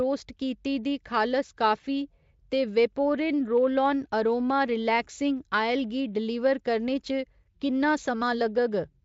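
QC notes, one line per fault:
1.81–1.85 s, VoIP packet loss concealed by the speech codec: the decoder stretches its last pitch and spectral envelope across the gap at falling gain, so the speech briefly takes on a smeared, buzzy or noise-like quality. The disturbance lasts about 40 ms, which fits a single 20 ms packet dropped, plus a short recovery while the decoder's frame-to-frame state rebuilds. The surrounding Speex-coded audio shows no more than faint coding texture.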